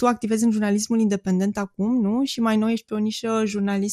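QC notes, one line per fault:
Throughout: MP2 compression, likely the cause of the dull, plainly gurgly character running under the whole speech clip. Layer II chops the signal into 32 equal sub-bands and shares out bits between them. Here there aren't enough to go round, so the top bands drop out and flicker back, and what's left is coarsely quantised, giving that grainy edge. The amount of damage fits a rate of about 80 kbps.
1.55 to 1.59 s: DAB burbling, a short burble right after "activezi în jurnalismul independent". This is what happens when reception bit errors slip past the error correction into the MP2 data. Corrupted samples put short noise blips into single sub-bands, and corrupted scale factors make sub-bands lurch in level for up to a frame, so you get a brief burst of burbling. It sounds like about 8 frames hit at a low error rate, around 0.15 percent.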